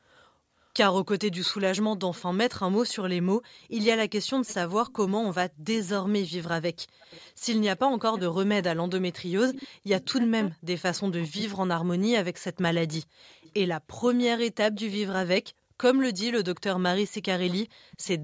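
From 0.63 to 1.62 s, 4.46 to 5.9 s, 12.93 to 14.8 s and 16.19 to 18.07 s there is an echo leak. A faint copy of the speech trails the original by about 0.4 s (398 to 407 ms), most likely because a far-end loudspeaker's echo canceller let some of its microphone pickup through. The copy sits about 20 to 25 dB below the speech. Unlike room reverberation, it is a distinct, late repeat rather than a smooth tail.

Between 7.79 and 11.9 s the speech is suppressed in double talk, in pieces totalling about 2 s. Here the echo canceller likely mistook overlapping talk for echo and attenuated it. The deepest drops are about 40 dB. The dips follow the overlap and the level recovers between them, which sets this apart from a network dropout, where the sound cuts cleanly regardless of who is speaking. The call's microphone processing limits content to 8 kHz.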